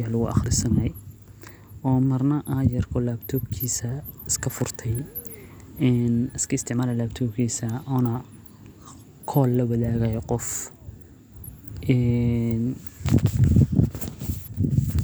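No technical faults can be heard anywhere in this speech.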